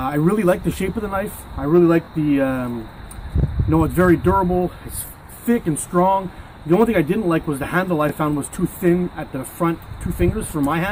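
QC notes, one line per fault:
5.07–5.09 s and 8.09–8.12 s, overlapping chunks: each join between 3 s processing blocks restarts about 21 ms early, so that slice of audio plays twice. The doubled fragment is heard as a brief stutter or click.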